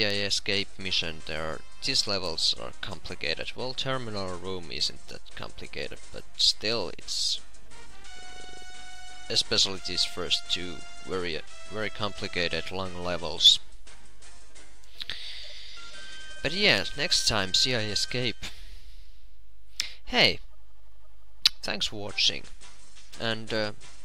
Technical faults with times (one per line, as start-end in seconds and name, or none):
none